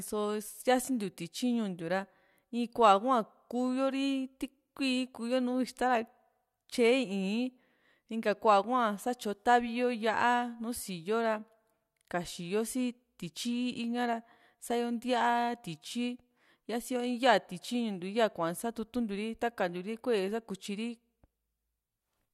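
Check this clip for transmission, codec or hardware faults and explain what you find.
No faults found in this recording.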